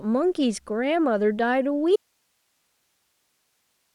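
At 1.96 s the speech cuts off abruptly in an audio dropout to a faint residue, with only low hiss, roughly 50 dB below the speech level, remaining through the end. The likely cause is a signal loss upstream while the downstream path stayed live.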